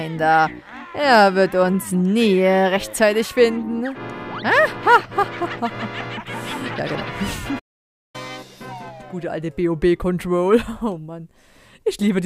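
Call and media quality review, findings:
Playback stall, 7.59 to 8.16 s. Player output starved of data or its thread blocked, likely at the playback buffer or render thread. Output goes silent for about 0.55 s, cutting the sound off mid-flow, then it starts again once the player recovers.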